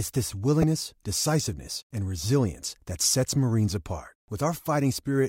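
Damaged data in a compressed stream occurs at 0.60 to 0.64 s, just before "decisiveness and resilience that". Corrupted bytes make the decoder misread the frames there and lose sync until it finds the next frame header, producing a brief glitch.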